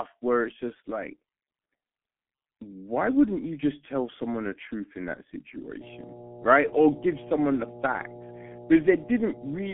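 Throughout, the speech carries the sound of the G.723.1 codec: nothing above about 3.7 kHz, a hoarse, buzzy texture and smeared consonants, heavy enough to fit a 6.3 kbit/s rate. Unlike a plain telephone band-limit, the voice itself sounds coarsely rebuilt, not just narrowed.

From 5.81 s, right after "the truth in that", mains hum sets in and lasts to the end at 9.73 s: a steady 60 Hz tone with low harmonics, loud and close to the speech level. Its fixed pitch and constancy distinguish it from rumble or wind noise.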